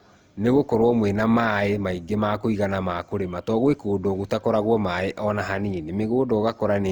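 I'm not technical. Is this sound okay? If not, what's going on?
No. Throughout, the speech sounds swirly, hollow and smeared, with blurred consonant onsets. This is generation loss, likely from being compressed about three times over, so the damage builds up beyond what a single compression would cause.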